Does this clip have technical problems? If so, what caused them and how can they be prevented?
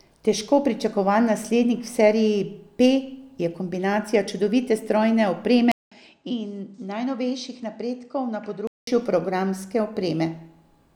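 Yes. From 5.72 s to 8.87 s, just after "je kombinacija čudovite strojne", the recording system likely switched to a poorer input device. A gap of about 200 ms of silence marks the switch. The substitute device passes nothing above 8.8 kHz, so the speech turns duller, drops roughly 10 dB in level, and carries its own faint background noise about 55 dB below the signal before the original input returns. To prevent this, lock the recording to one chosen microphone and turn off automatic device switching in the operating system and recording software.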